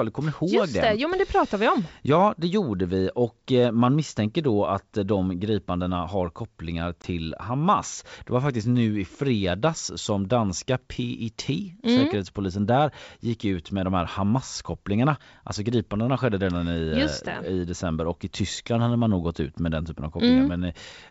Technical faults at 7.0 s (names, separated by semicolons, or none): packet loss on an ADPCM call